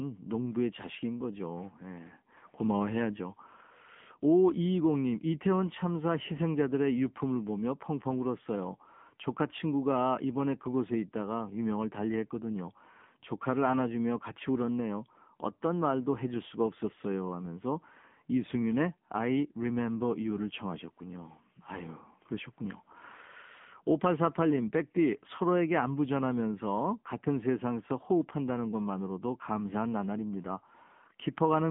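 From start to finish the speech sounds thin, buzzy and somewhat synthetic, with nothing above about 3.6 kHz and little below 150 Hz. This is the AMR narrowband mobile codec. Its vocal-tract model, starved at a low bitrate that fits roughly 8 kbps, leaves the damage plainly audible.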